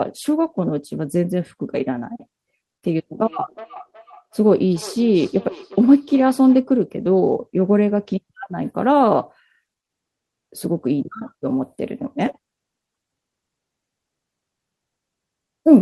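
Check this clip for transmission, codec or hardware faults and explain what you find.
One fault is present.

From 3.2 to 6.7 s there is feedback echo between two devices. A nearby device replays the speech into the microphone, so syllables return roughly every 400 ms, about 20 dB down. These show as evenly spaced, fainter copies in the waveform and spectrogram.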